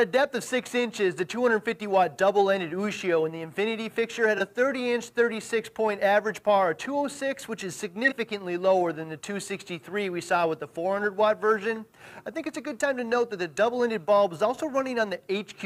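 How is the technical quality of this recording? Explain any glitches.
Two brief glitches from corrupt frame concealment. At 4.38–4.41 s and 8.04–8.13 s, the decoder detected damaged AAC frames and masked them, covering roughly one frame and three frames.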